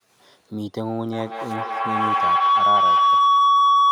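From 1.12 s to the end, feedback howl builds as two devices loop each other. A tone around 1 kHz grows with repeats about every fifth of a second, peaking about 10 dB over the speech.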